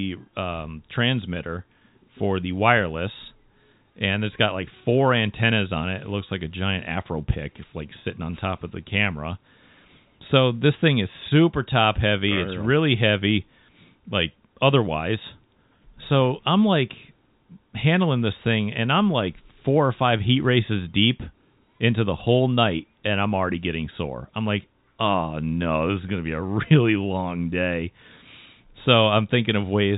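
No technical faults can be heard in the speech, which carries the narrow band of G.711 telephone coding with nothing above 3.8 kHz, as a fixed-line telephone path should.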